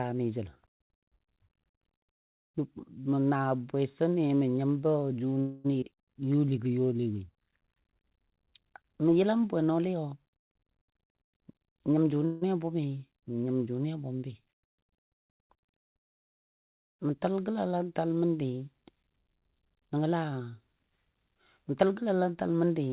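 A speech recording carried over a call path whose audio stops at 4 kHz, which fits G.711 mu-law at 64 kbps. At 5.40 s there is a call audio freeze lasting until 5.67 s. The last sound is stretched into a fading buzz or hiss for about 243 ms. It is likely caused by packets held up in transit, which drained the jitter buffer. Nothing is lost. Speech simply resumes later. A second freeze runs from 12.25 to 12.45 s, with about 164 ms of filled sound, just before "a bʊmi nyim jʊnɨ". Right after the first freeze, at 5.80 to 5.85 s, there is a skip ahead. Roughly a tenth of a second of speech is dropped, and the two sides are joined with only a brief 14 ms fill. The delay built up by the freeze is partly thrown away here, so the speech jumps forward. From 6.20 to 7.01 s comes a jitter buffer slow-down. The receiver repeats pitch periods to rebuild its reserve, adding 109 ms. Speech runs at 87 percent of its pace at unchanged pitch, so sounds are drawn out and may warble slightly. 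Jitter buffer speed-ups occur from 10.87 to 12.20 s, ending just before "a bʊmi nyim jʊnɨ", then from 15.11 to 16.63 s, and from 19.88 to 22.65 s. The buffer holds too much audio, so short pitch-period pieces are cut out. The first two run at 105 and 103 percent. The last is clearly hurried at 109 percent, with about 300 ms removed.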